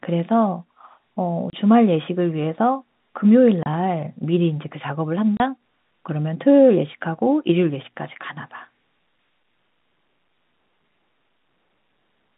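A speech recording over a telephone-band line (roughly 150 Hz to 3.7 kHz, as G.711 telephone coding would give) is chopped by three brief dropouts at 1.5 s, 3.63 s and 5.37 s, each 30 ms of dead silence with hard edges. This is packet loss filled with silence: single lost packets, which fits a 30 ms packet size, were replaced by silence.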